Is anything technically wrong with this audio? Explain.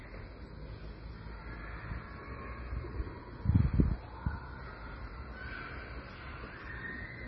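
Yes. All the way through, the sound is dull and washy, with nothing above 7.8 kHz and a watery, swirly texture that's pretty heavy. That's likely MP3 compression at a low bitrate, something near 24 kbps. Short on bits, the encoder chops the treble at a fixed point and drops the weaker frequency lines, which then flicker in and out from frame to frame. That flicker is the swirl, and the sharp attacks also come out smeared.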